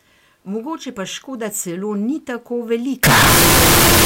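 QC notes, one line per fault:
3.03–4.05 s, float read as integer: 32-bit float samples likely read as 32-bit integers, forcing a near-square wave at an almost fixed, high level. Very loud, harsh, background noise as loud as speech.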